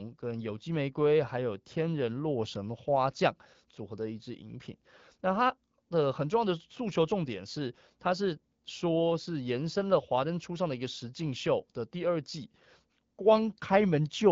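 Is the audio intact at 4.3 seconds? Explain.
Yes, the audio is intact at 4.3 seconds, with no fault at that moment.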